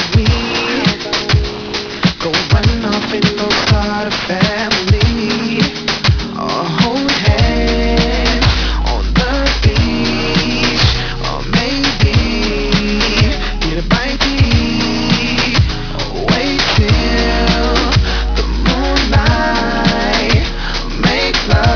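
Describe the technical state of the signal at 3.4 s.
At 3.4 s, aliasing is present, as it is throughout the clip. Content above 5.5 kHz folds back to unrelated lower pitches, which fits a rate drop from 48 kHz to 11 kHz without filtering. The folded energy is strong, giving a gritty, metallic edge.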